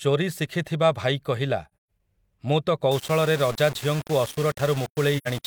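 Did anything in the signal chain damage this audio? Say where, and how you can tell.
Yes, two kinds of damage.

At the codec or network stage there's AAC frame loss with muting. Right after "ଚୋରୀ ଶିଖିଥିବା ଭାଇ କହିଲା", the sound drops out around 1.79 to 1.86 s, with about 213 ms of material missing across a 341 ms stretch and the longest gap about 150 ms. It happens again at 5.17 to 5.28 s, where about 85 ms is gone within 128 ms. The decoder zeroed the missing frames, and the overlapping windows fade the speech out and back in, so you hear soft-edged holes.

From 2.91 s to the end, the speech gets gritty, grainy distortion that moves with the signal. The noise sits about 15 dB below the speech, and quiet parts sputter rather than fade smoothly. That's low bit depth without dither, likely from a sample-format conversion down to about 5 bits with plain rounding. With no dither, the quantisation error stays correlated with the speech, so it's heard as distortion rather than steady hiss.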